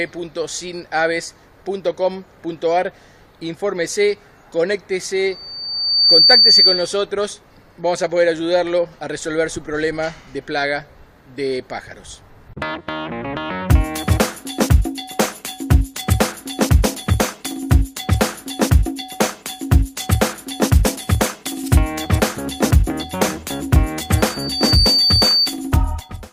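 From 3.38 to 3.40 s, a corrupt frame decoded produces a brief blip, consistent with a couple of damaged frames; a spectrogram shows a thin vertical smear of misplaced energy. At 5.32 s a loudspeaker feedback squeal begins: a 4.6 kHz loop tone swells for under a second to about 10 dB above the sound, lasting until 6.98 s, drawn as a bright horizontal line. Inside it, at 5.64 s, another corrupt frame leaves a short vertical streak. From 24.18 to 25.58 s the 4.6 kHz squeal returns, building in about half a second to roughly 5 dB above the sound.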